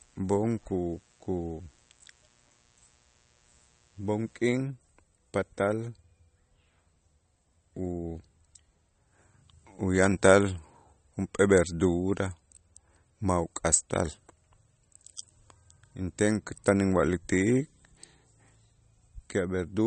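From the start until 4.66 s a faint mains buzz sits well below the speech. Switching spikes at 60 Hz, twice per cycle, add harmonics reaching several kilohertz, giving a raspy edge rather than the smooth, pure hum of a plain 60 Hz tone.

Throughout the clip the speech is band-limited, with nothing above 8.4 kHz, and has a watery, swirling texture on s sounds. This is likely MP3 compression at a low rate, which fits about 32 kbps: weak frequency lines flicker between frames, unlike a simple low-pass filter's steady dullness.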